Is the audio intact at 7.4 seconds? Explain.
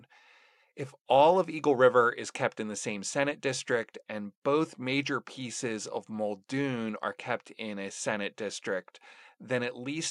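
Yes, the speech at 7.4 seconds is intact, with no dropout, click, distortion or other fault at that moment.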